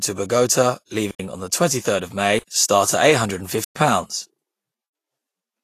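Throughout, the speech sounds hissy and grainy with roughened tones, likely from low-bitrate Vorbis compression around 33 kbps; a spectrogram shows nothing above 14.2 kHz and a speckled upper band.

Blocks of digital silence cut in at 1.11–1.20 s, at 2.39–2.48 s just before "start at", at 3.64–3.76 s and at 4.86–4.95 s. Each is a flat, silent line with hard edges, about 85 ms long (113 ms for the third); the 85 ms gaps fit an unfilled 4096-sample output buffer.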